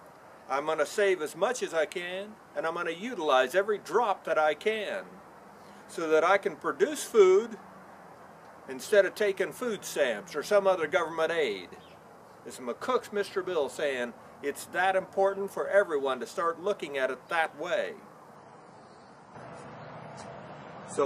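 Adaptive stream at a lower bitrate, from 18.36 s to the end: the playback abruptly switches to a lower-quality version of the stream, with no gap. This happens when the connection slows. The drop in quality is consistent with the stream stepping down from about 128 kbit/s to about 32 kbit/s MP3. Nothing is left above 10.5 kHz, so the top end falls away, and codec artefacts increase for the rest of the audio.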